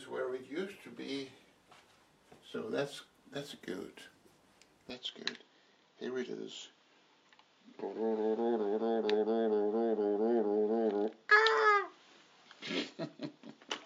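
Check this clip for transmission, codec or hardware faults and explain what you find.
One fault is present. From 4.9 s to the end, the audio turns dull, with nothing above 7.2 kHz and a faint new noise floor, but no gap or level jump. This is likely an input switched to a poorer device with a narrower band. On a spectrogram the top band empties abruptly at 4.9 s, while the waveform's envelope stays the same.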